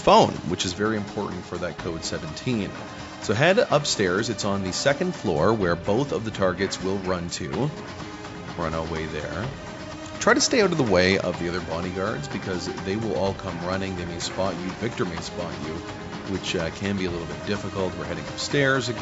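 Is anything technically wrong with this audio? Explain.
No, nothing technically wrong stood out on listening to this audio.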